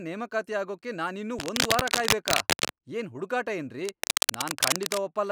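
From 1.39 to 2.85 s, right after "ನೇಮಕಾತಿ ಆಗೋಕೆ ನಾನಿನ್ನೂ", dense, ragged scratching and rustling sits over the speech, somewhat louder than the voice, until "ಏನ್ ಹುಡುಗಾಟ". It returns after that phrase, from 3.84 to 5.04 s, at roughly the speech's level. This is cable scratch noise, likely from a worn cable or connector being moved so its contact resistance fluctuated rapidly, injecting uneven bursts of noise.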